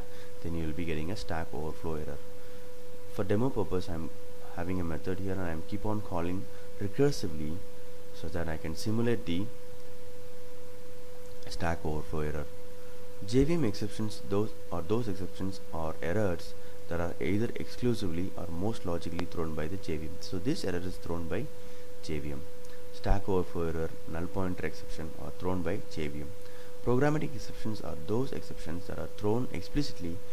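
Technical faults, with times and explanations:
19.19 to 19.22 s, loud pop: a single sharp thump well above the surrounding level, likely a voltage pulse from a switch or static, with the sound continuing uninterrupted beneath it.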